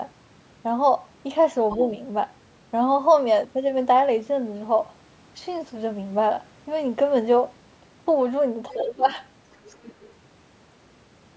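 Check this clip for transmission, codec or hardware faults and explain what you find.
Yes, two echo-related faults appear where the far end talks over this speech.

Other side's voice leaking through, at 1.70–1.82, 8.72–8.87 and 9.52–10.08 s: a faint second voice about 15, 30 and 25 dB down, likely residual loudspeaker echo, showing as stray harmonic traces on a spectrogram.

Speech suppressed in double talk, at 1.77–1.91 s and 8.73–9.08 s: the voice sags a few dB, then about 20 dB, likely the echo canceller ducking both sides, seen as waveform envelope dips.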